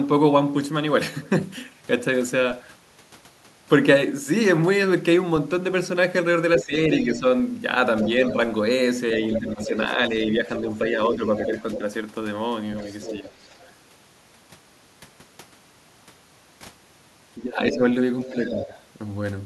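An echo canceller that likely could not tell the near talker from loudspeaker echo during double talk turns the speech down. This causes speech suppressed in double talk at 6.59–7.24, 8.33–11.56, 12.82–13.31 and 17.37–18.71 s, with dips of about 10, 10, 5 and 15 dB. The talker's voice sinks or breaks up while the far end speaks. The same canceller is also likely leaving loudspeaker sound in the microphone signal, so the other side's voice leaks through at 7.03–8.33, 9.24–11.78, 12.87–13.72 and 17.71–18.83 s. It sits about 10 dB below the talker, about 15 dB below in the third stretch, and is heard as a fainter second voice under the main one.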